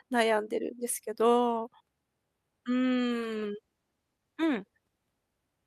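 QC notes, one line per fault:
2.94 s to end: call bitrate drop. Speech turns coarse and watery, which fits a fall from 48 to 18 kbps, worst for 1.64 s, with no dropouts.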